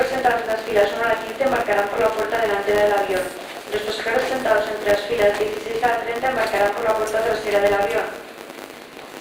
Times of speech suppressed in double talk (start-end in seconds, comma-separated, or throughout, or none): none